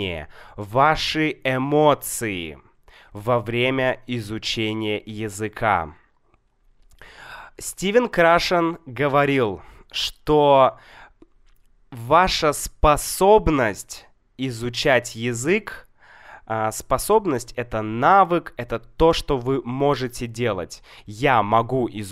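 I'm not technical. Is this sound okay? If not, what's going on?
Yes, this speech recording sounds fine. Nothing in it suggests a technical problem with how it was recorded or played back.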